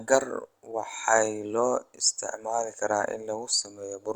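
Nothing technically wrong turns up anywhere in this short bit of speech, so there's no fault to point to and no timing or cause to give.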